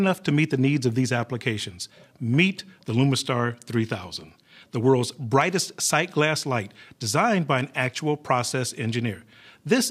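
No technical faults are audible.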